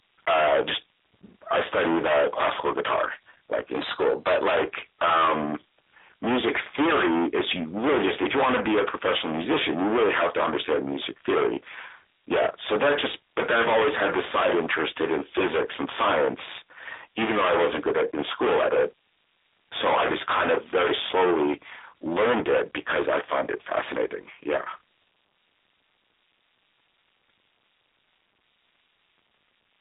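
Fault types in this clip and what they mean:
Hard clipping: a stage overloaded by about 31 dB flattens roughly a third of the waveform, so the speech carries a constant harsh fuzz throughout.
Drift correction step: likely clock-matching software jumping the playback rate, speeding the speech 5.3% and raising pitch about 89 cents from 3.71 to 4.51 s.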